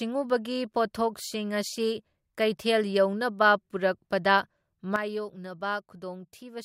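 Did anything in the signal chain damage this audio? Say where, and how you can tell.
Yes. At 4.96 s the speech and its background noise drop together by about 9 dB and stay at that lower level to the end of the clip. This is a sudden gain jump, most likely a digital gain setting applied in the driver or processing stage without a ramp, so the level changes from one sample to the next. On the waveform the envelope steps down abruptly at 4.96 s. On a spectrogram every frequency band darkens at once, including the noise floor between syllables.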